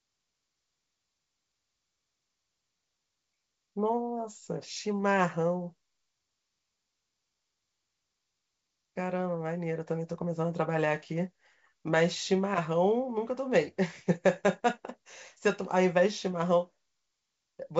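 Nothing stood out on listening to this speech clip, which comes through as ordinary wideband telephone audio.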